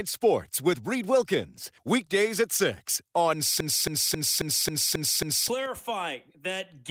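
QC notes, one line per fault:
3.60 to 5.48 s, broken-record loop: a 0.27 s fragment of speech repeats seven times, identical and back to back, and the speech due in that span is lost, likely from a stalled player or stream resending its last buffer. Unlike echo, the copies don't decay.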